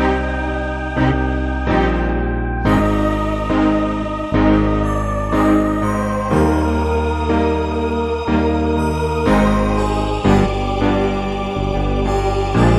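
Compressed frames are skipped three times, at 4.02, 10.43 and 11.73 s. The audio jumps ahead by a few tenths of a second at most, longest at 10.43 s. The jumps fit whole lost frames of about 46 ms.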